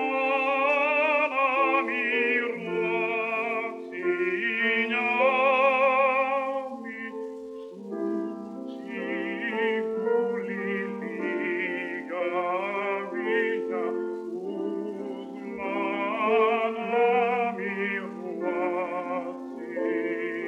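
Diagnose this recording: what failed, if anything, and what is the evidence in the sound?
Nothing in the recording points to a failure at any stage of the chain. No point in the sound gives evidence of a fault that would need diagnosing.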